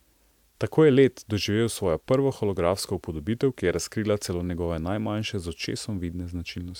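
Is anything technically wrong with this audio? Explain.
No, the signal shows no technical fault anywhere in the recording.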